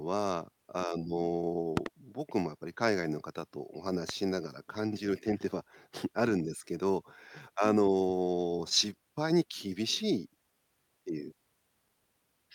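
At 1.77 to 1.88 s a loud pop lands as two quick thumps, about 20 dB above the speech, and a single one follows at 4.09 to 4.12 s, about 15 dB up. These are likely voltage transients from a switch or static. Each shows as a tall waveform spike and a thin broadband spectrogram stripe.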